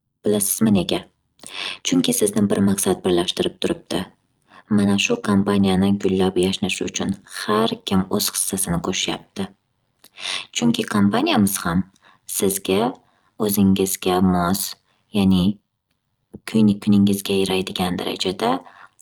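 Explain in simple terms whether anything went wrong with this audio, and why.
Overlap-add ripple runs through the whole recording: the speech level pulses roughly a hundred times a second, giving a buzzy, metallic sound rather than gaps or dropouts.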